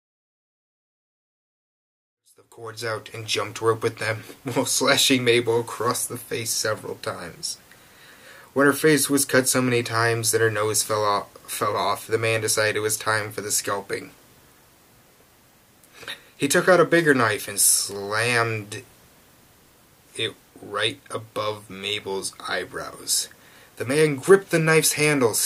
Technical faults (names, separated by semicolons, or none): none